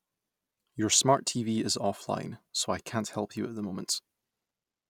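No technical faults can be heard anywhere in the recording.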